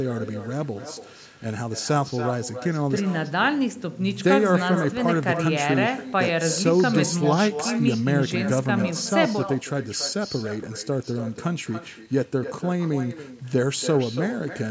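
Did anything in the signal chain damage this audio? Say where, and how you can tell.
Yes. Echo with no canceller, far end. Speech returns a third of a second later, about 11 dB quieter. Their loudspeaker reaches their microphone.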